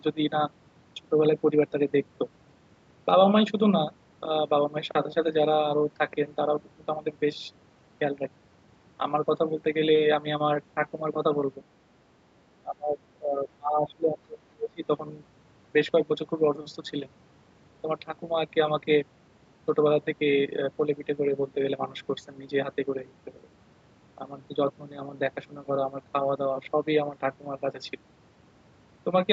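From 12.34 to 14.88 s the speech gets pulled down hard, dipping by around 25 dB and breaking up for about two seconds overall. That's speech suppressed in double talk, likely an echo canceller mistaking the talker for echo while both sides spoke.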